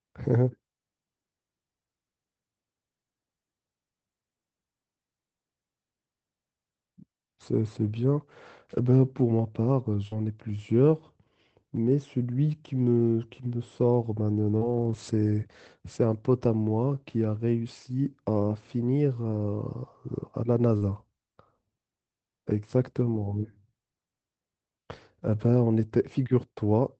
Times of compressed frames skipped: none

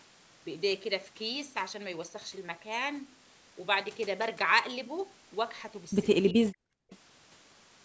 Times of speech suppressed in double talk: 6.32-6.66

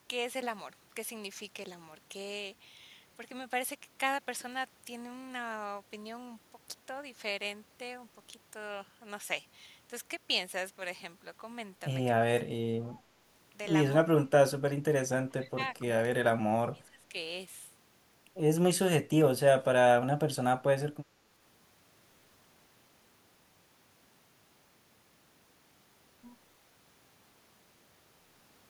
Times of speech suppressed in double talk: 12.38-13.04, 14.18-14.31, 15.26-15.64, 16.24-17.14

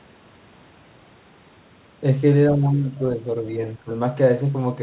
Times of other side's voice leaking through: 2.48-3.00

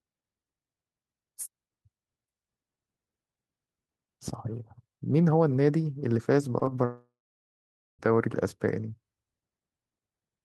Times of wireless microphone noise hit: none

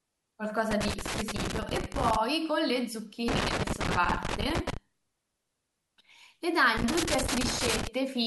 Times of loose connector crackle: 0.71-2.16, 3.28-4.77, 6.77-7.87

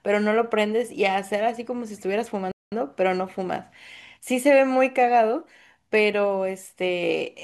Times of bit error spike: none

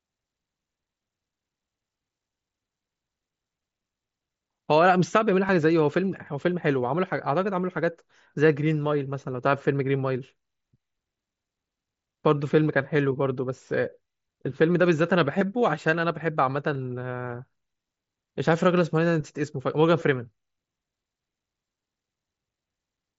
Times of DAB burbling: none

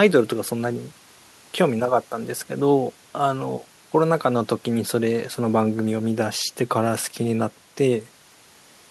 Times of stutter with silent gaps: none

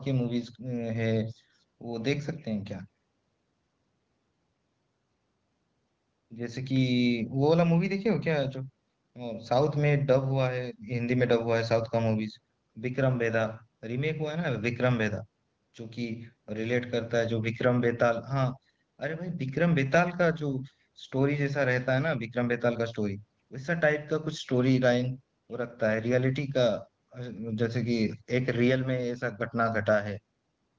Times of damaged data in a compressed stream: none

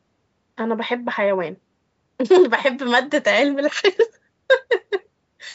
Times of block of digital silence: none

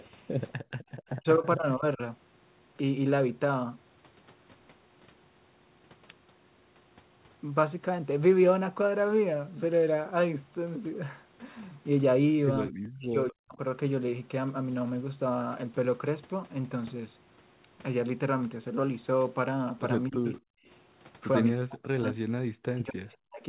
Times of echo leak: 0.00-0.04, 20.27-20.34

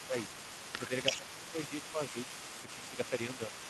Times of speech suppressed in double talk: 0.07-0.14, 0.78-0.91, 1.17-2.28, 2.62-3.53

